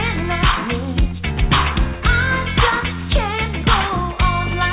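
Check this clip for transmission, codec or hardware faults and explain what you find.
No transmission, codec or hardware faults turn up here: the audio carries the narrowband character of a telephone-grade call path, with nothing above 4 kHz, which fits G.711 mu-law coding at 64 kbps, and the signal holds steady throughout with no gaps, dropouts or sudden level changes.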